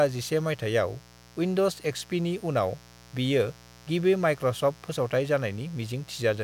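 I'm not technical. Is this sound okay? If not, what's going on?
No. Mains buzz runs through the whole recording: a steady, raspy hum under the speech, quieter than the voice. Electrical interference from a dimmer, power supply or unshielded cable is leaking in, repeating with the 60 Hz household power.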